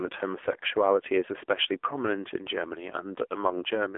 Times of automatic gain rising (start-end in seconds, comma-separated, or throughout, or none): none